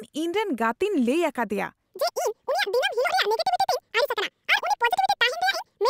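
From 1.85 s to the end, the speech becomes a section at the wrong speed: it runs 1.83 times too fast, and pitch rises by roughly ten semitones, so delivery sounds hurried and high, likely from playback clocked at the wrong rate.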